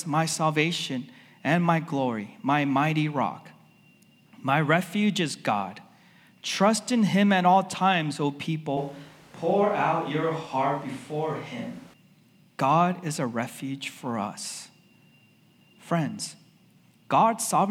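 At 8.77 s the speech suddenly turns roomy and hollow. The low end thins out and more of the room comes through. The loudness stays about the same. Background noise rises to sit roughly 25 dB below the speech. At 11.93 s the close, full sound returns just as abruptly. This is a switch to a distant microphone. The likely cause is that the close microphone's signal dropped out and a farther one, such as a camera's, took over for those three seconds.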